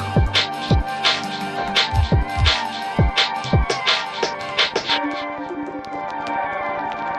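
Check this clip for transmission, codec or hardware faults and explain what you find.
A train of clicks runs from 4.41 s to 7.12 s: about thirty near-identical pulses at a steady 12.2 per second, roughly as loud as the sound itself. Likely interference or a faulty connection or power supply injecting pulses. Their regular, even spacing separates them from random crackle.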